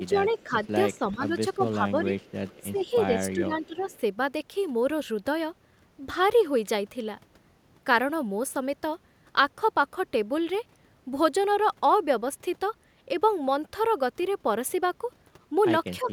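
A speech recording whose first four seconds show both faults. Speech suppressed in double talk appears from 0.09 to 2.15 s, 2.61 to 3.93 s and 16.03 to 16.11 s, with the voice dipping by about 10 dB, and by about 15 dB in the second stretch. This is likely an echo canceller ducking the near talker while the far side also spoke. On a waveform it shows as sudden notches in the envelope, and on a spectrogram as faded or blanked patches. Echo leak shows from 0.35 to 1.15 s, 2.19 to 2.86 s and 3.66 to 3.98 s as a faint copy of the voice trailing 360 ms behind, about 30 dB down (about 35 dB in the last stretch). It is likely the residue of loudspeaker sound the far end's canceller failed to remove. A spectrogram would show weak, blurred duplicates of the speech harmonics shifted later in time, too low to see on the waveform.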